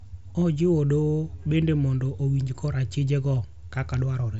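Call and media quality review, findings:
No faults found: the speech carries the expected wideband Bluetooth headset character of the mSBC codec, with a band limit near 7.7 kHz and only light codec graininess.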